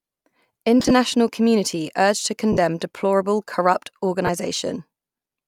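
Lost LE Audio frames occur three times. From 0.80 to 0.91 s, just before "community urged to", about 60 ms of audio drops out in short runs of up to around 30 ms. That is about eight 7.5 ms LC3 frames. At 2.53 to 2.57 s, before "deplorable corrupt", 45 ms is lost, and at 4.26 to 4.29 s, 22.5 ms. The decoder refills each gap with the previous spectrum under random signs, so harmonics blur into a brief noisy smear. On a spectrogram, the harmonic lines there turn into diffuse broadband patches.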